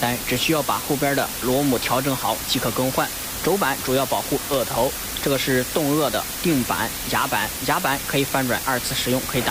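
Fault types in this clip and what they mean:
Low bit depth with dither: present throughout, a constant, even hiss with no distortion, sitting only a little below the sound itself, so the wanted signal barely rises above it. Noise was mixed in before each sample was rounded to a very coarse set of levels, turning the rounding error into steady broadband noise instead of grit. A noise floor this high fits a word length of about 4 bits.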